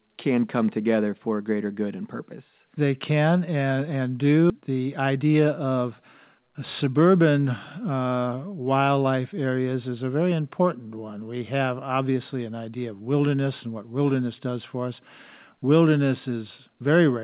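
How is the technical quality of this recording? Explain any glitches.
The recording has two related timing glitches close together in a call path. The path's G.711 A-law coding leaves nothing above 4 kHz, so the speech sounds narrowband.

The first is a skip ahead at 4.50 to 4.52 s. Roughly 0.7 s of speech is gone. Later audio was already queued, so the stretch was dropped, on the way or by the jitter buffer, and playback jumped forward. No fill was inserted. The two sides are joined almost directly. Speech simply leaps ahead with a small seam and no pause.

The second is a jitter buffer speed-up from 4.60 to 6.43 s. The buffer was still holding more audio than it aims for. To cut that delay, the receiver removed short pieces of one or a few pitch periods, over and over. About 150 ms was taken out in total. Speech runs at about 108% speed, and the pitch does not change. This stretch sounds hurried.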